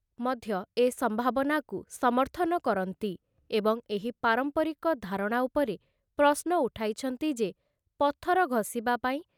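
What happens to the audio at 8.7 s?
Nothing goes wrong at 8.7 s; the speech carries on intact through that moment with no audible fault.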